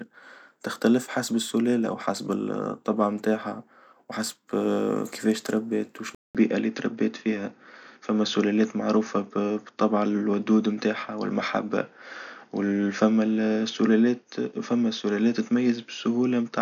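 Right after "كفاش تربت", at about 6.15 s, the speech drops out for 200 ms and comes back duller, staying that way to the end. That's the signature of an input switched to a poorer device: the system likely swapped to another microphone or a headset profile. Nothing above 6.7 kHz survives, so the top end goes boxy, while loudness barely shifts. A faint new noise floor, sitting far below the speech, arrives with it.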